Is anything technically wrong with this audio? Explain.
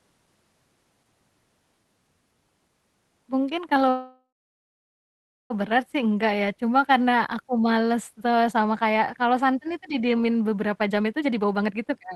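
Yes. From 3.89 to 5.52 s, just before "berat sih", there's a call audio freeze. The last sound decays into about 1.2 s of silence, likely because packets stalled and the jitter buffer emptied. Nothing is skipped afterward, which rules out a dropout.

After "kalau santan itu didiemin", from 10.71 to 12.12 s, a jitter buffer speed-up removes roughly half a second of pitch periods. Speech runs at 133% with unchanged pitch, so it sounds hurried rather than chipmunk-like.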